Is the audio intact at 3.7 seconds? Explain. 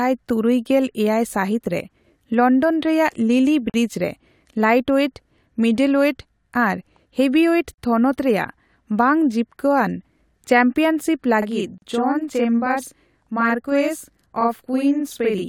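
No. At 3.70 seconds the speech drops out into a brief silence of about 43 ms, lasting until 3.74 s. Its edges are smeared by the codec, and the speech then resumes exactly where it left off. This is a gap at a join of encoded pieces. The audio was encoded in separate segments, and each encoder run's start-up delay and final-frame padding were left in when the pieces were butted together. That accounts for the hole, which fits a join pattern repeating every 4 seconds.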